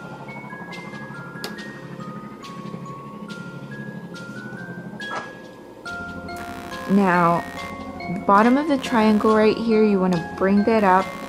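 From 6.38 s to the end at 11.28 s, the computer's own workload bleeds into the audio path. Changing current draw from the processor, graphics card or mouse shifts the ground that the audio circuit shares, and that shift rides on the signal as computer activity noise. It comes through as a rapid, buzzy chirping that pulses around 70 times per second and sits roughly 20 dB under the sound. It follows the machine's activity rather than the audio.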